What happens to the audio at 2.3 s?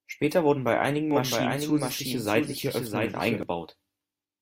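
At 2.3 s you're inside a doubled audio track running from 1.11 to 3.43 s, just after "wurden bei einigen". A dry, full-band second copy of the speech trails roughly 0.7 s behind, about 5 dB quieter, and cuts in and out abruptly. It's likely from a second, slower capture path.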